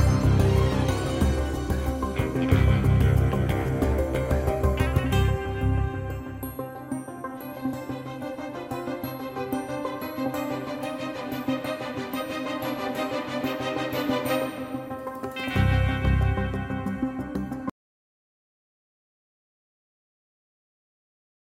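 At 17.70 s the sound cuts off abruptly and stays silent, with no room tone, through to the end. This is an audio dropout to silence, where the input was likely lost while the recorder kept writing silence, so anything after that point is gone.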